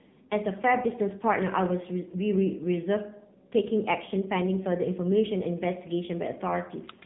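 From start to finish the speech sounds boxed-in and buzzy, with a synthetic, robotic edge and nothing audible above about 3.8 kHz. This is the AMR narrowband mobile codec, heavily degraded at what sounds like a low rate near 6.7 kbps, rebuilding the voice from a crude vocal-tract model.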